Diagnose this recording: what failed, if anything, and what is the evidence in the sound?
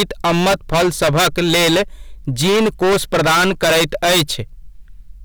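Harsh fuzz coats every loud syllable throughout the speech: hard clipping, with about 23 dB of overdrive flattening roughly a third of samples at a converter or gain stage.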